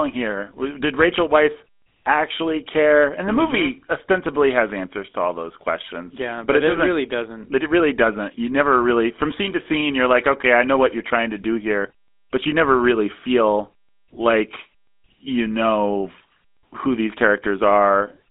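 GSM full-rate codec throughout: the speech is rebuilt from a pulse-driven vocal-tract model, which fits about 13 kbps. It sounds plainly buzzy and gravelly, limited to 250 Hz–3.6 kHz.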